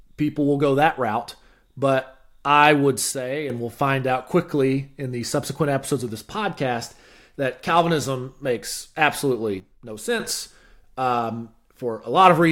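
Right after "I would", at about 3.12 s, the level drops abruptly by about 9 dB and stays down until 3.50 s, just before "we'll find out quickly". It happens again from 9.6 s to 10.2 s, down about 10 dB. Both are a sudden gain jump: speech and room noise fall together in one step with no fade, which is likely a gain setting applied instantly instead of ramped.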